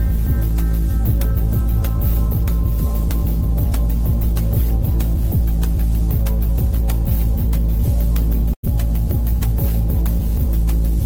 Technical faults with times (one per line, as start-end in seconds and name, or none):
8.53-8.65 burst of packet loss